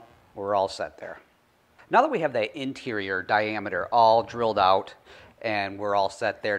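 No technical faults can be heard anywhere in the audio, and the signal holds steady throughout without any disturbance.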